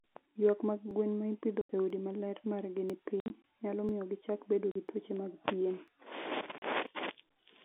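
At 0.91 s the sound skips. The same tiny skip recurs at 1.90, 2.90, 3.89, 4.88, 5.88 and 6.87 s. That is once per second, each losing a few milliseconds. This is audio missing between chunks, likely from a recorder dropping samples at each one-second boundary.

From 1.61 to 1.69 s an 80 ms hole cuts the speech. This is packet loss filled with silence. The edges are hard. From 3.20 to 3.44 s, 100 ms of gaps are scattered over 240 ms, the longest 60 ms. Shorter 40 ms holes follow at 4.71 and 6.58 s. All of them fit 20 ms packets.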